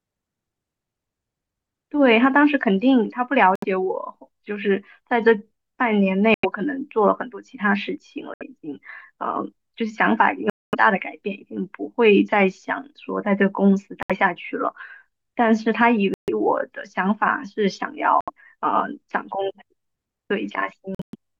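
The speech cuts out eight times, at 3.55, 6.34, 8.34, 10.50, 14.03, 16.14, 18.21 and 20.95 s. Each gap is a hard silence of roughly 70 to 230 ms, with the longest at 10.50 s. The speech picks up further along each time, as if it had kept playing through the hole. That pattern is likely a Bluetooth dropout, where packets arrive too late and get discarded. The last one is broken up, losing about 160 ms over 0.19 s with a longest run of 116 ms.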